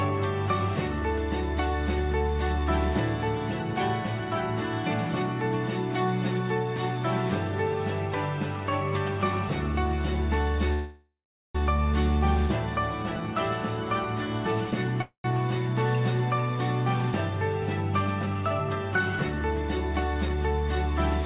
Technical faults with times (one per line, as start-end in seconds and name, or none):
10.73-11.57 call audio freeze
13.03-13.35 jitter buffer slow-down
15.02-15.27 call audio freeze
18.06-20.48 jitter buffer speed-up